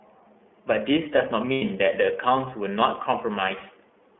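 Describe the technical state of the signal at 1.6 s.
At 1.6 s the speech turns into a held, faintly buzzy and breathy vowel that runs from 1.52 to 1.62 s before clear speech resumes almost immediately. These are lost iLBC frames. When the packets failed to arrive, the decoder filled the gap by repeating the last pitch cycle it had, blended with noise. The roughly 90 ms gap fits three missing 30 ms frames. Because each iLBC frame is decoded on its own, the first good packet after the gap restores the voice without a ragged recovery.

Under that, and across the whole clip, the audio carries plainly audible iLBC codec damage. The speech is band-limited to about 200 Hz to 3.4 kHz, with nothing above that, and it sounds slightly rough and synthetic. The 30 ms framing points to iLBC's 13.33 kbps mode.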